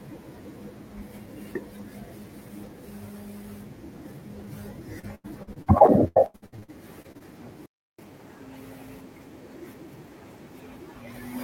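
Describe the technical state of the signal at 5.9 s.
At 5.9 s the speech sits inside a stretch of repeated packet loss (robotic sound) running from 4.99 to 7.22 s. Audio keeps dropping out, and each hole is patched by extending the preceding sound. The pattern points to around seventeen separate losses, the longest about 88 ms, with roughly a third of the span concealed. The rapid alternation of real and synthesized fragments gives a choppy, robotic quality with pieces missing.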